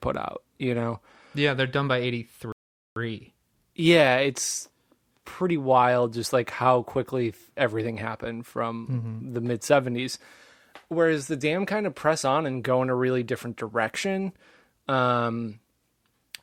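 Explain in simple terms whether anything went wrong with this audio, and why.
At about 2.52 seconds the speech cuts to silence, then picks up at 2.96 seconds right where it left off. That's a rebuffering stall: the player ran out of downloaded audio and waited for more. Nothing goes missing; it just adds roughly 0.44 seconds of dead air.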